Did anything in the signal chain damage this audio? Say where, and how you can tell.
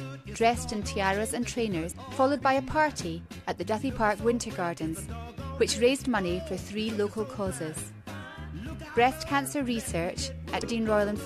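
Yes, there's damaged data in the compressed stream, so this is a codec or storage problem. There are two brief glitches, one from 1.91 to 1.93 s and another at 10.61 s, each a quick chirp or blip lasting about 20 ms. What happens is that bytes in the encoded file get corrupted. The decoder misreads those frames, loses sync, and hunts for the next valid frame header. That short stretch of garbage comes out as the blip before decoding recovers.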